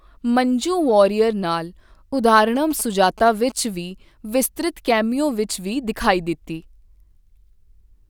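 From 2.56 to 3.52 s a galloping dit-dit-dit of short 217 Hz buzzes sits about 20 dB below the speech. These are GSM signalling bursts: a nearby 2G phone sends brief groups of radio bursts, and the audio circuitry rectifies them into audible pulses.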